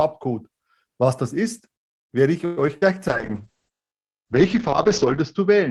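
It's a speech clip with a cluster of network trouble in the middle. From 2.45 to 2.59 s there's a call audio freeze: the last sound is stretched into a fading buzz or hiss for about 0.12 s, most likely because packets were held up and the jitter buffer ran dry. When the audio resumes it carries on from where it stopped, so nothing is lost, but everything after is pushed back by that same 0.12 s. Right after come two bits of short concealed packet loss, at 2.67 to 2.70 s and 2.78 to 2.84 s. Audio never reached the decoder in time, and the receiver patched the holes by extending the preceding sound before blending back in. That leaves a quick smear where about 20 ms and then 40 ms of real audio went missing. Then from 3.08 s to the end there's a call bitrate drop. The encoder gets squeezed from 32 kbps down to 7 kbps, sitting at the bottom for about 2.1 s, and the bandwidth narrows from 20 kHz to 8 kHz. 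So the speech turns coarse and muffled, with the top end gone.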